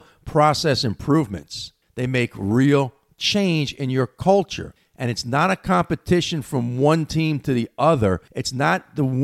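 Nothing goes wrong anywhere in this speech recording, so there's no technical fault to point to at any moment.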